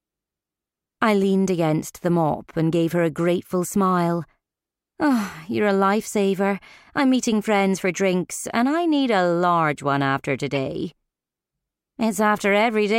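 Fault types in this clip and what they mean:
Damaged data in a compressed stream: a short glitch from 10.55 to 10.57 s, where corrupt bytes made the decoder misread frames and search for the next header.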